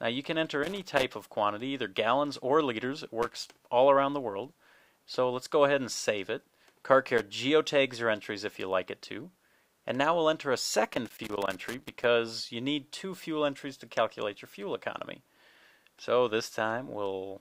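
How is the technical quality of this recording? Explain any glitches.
The recording is marred by four bursts of loose connector crackle, at 0.63 to 1.04 s, 3.22 to 3.47 s, 7.18 to 7.31 s and 10.93 to 12.04 s. A worn or dirty contact somewhere in the cable path is shifting and intermittently losing contact, so the signal is chopped on and off many times a second. Each burst comes through as irregular scratching and crackle over the sound, with the longest near 11 s.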